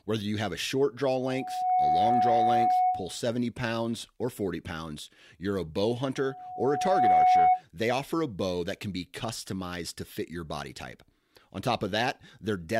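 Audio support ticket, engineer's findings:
Steady 735 Hz tone swelling over the speech, 1.15–3.21 s (after "have a short draw", until "pounds or") and 6.16–7.62 s (after "pounds you're a bow", until "they offer a bow"). Loudspeaker feedback squeal: mic-to-speaker loop gain above unity at 735 Hz, building over about half a second to roughly 5 dB above the speech, then over about a second to roughly 10 dB.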